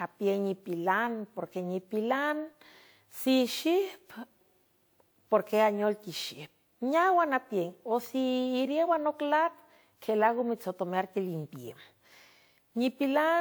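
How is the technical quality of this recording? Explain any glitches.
The quality is held back by one problem across the whole clip: generation loss. Throughout, the speech has a swirly, hollow, smeared character with softened attacks, most likely from being re-encoded about three times with a lossy codec, each pass adding fresh quantisation noise. The sound points to a WMA chain around 128 kbit/s, with nothing above roughly 20.1 kHz.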